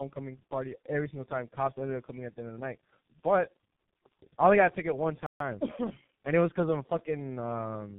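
Tandem speech coding runs through the whole clip: the speech passed through three speech coders in a row, each recoding the last one's damage, leaving it rough, warbly and muffled. A playback stall at 5.26 s, right after "got a ticket one", cuts the sound to silence for 140 ms, likely because the player ran short of data. Time-compressed catch-up follows from 5.40 to 6.78 s, with small pieces cut and cross-faded so the speech runs 1.1 times fast at normal pitch.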